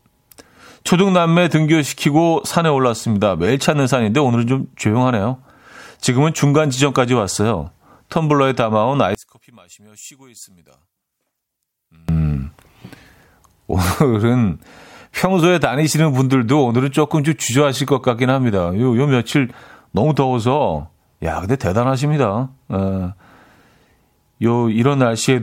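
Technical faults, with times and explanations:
9.15–12.09 s, one channel inverted: the speech falls by about 26 dB to a faint residue, likely because one stereo channel's polarity is reversed and the shared centre cancels in a mono sum. Unlike a dropout, a faint copy remains rather than silence.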